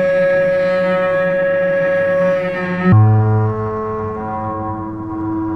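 From 2.92 s to the end, there's a section at the wrong speed: the sound drops to 0.585 times its proper rate, so it drags and sinks about ten semitones, going deep and sluggish. Likely it was played back against the wrong clock.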